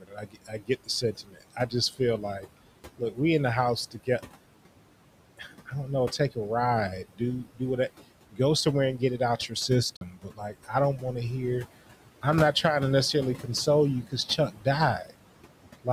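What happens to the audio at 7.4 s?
Speech cut by the noise suppressor: it mistakes part of the speech for noise between 7.13 and 7.61 s, pulling about 150 ms down by up to about 19 dB, so it sounds swallowed. Noise suppressor artifacts also continue here: the background is cut by about 18 dB between words and rises again underneath them.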